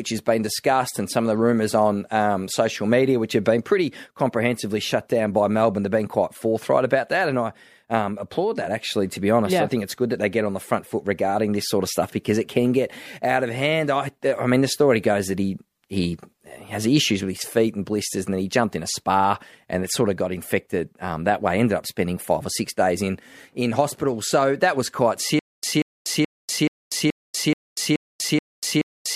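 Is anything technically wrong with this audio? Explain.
Yes. From 25.39 s, after "so that was quite", a stutter with silent gaps runs to the end: a 186 ms burst recurs every 428 ms between digital silences, likely from a stalled stream replaying its last fragment.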